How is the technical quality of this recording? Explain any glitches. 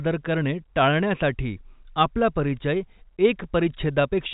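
Nothing stood out as a glitch on close listening; the speech carries the narrow telephone-band sound of G.711 coding, with nothing above about 3.8 kHz.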